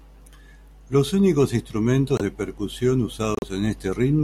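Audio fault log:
2.16–2.21 s and 3.35–3.44 s, corrupt frame decoded: brief chirpy bursts of noise, the first just before "de percusión" and the louder second just after it, each lasting a few frames. Damaged compressed frames were played anyway, so misread gains and codes scattered energy across wrong frequencies.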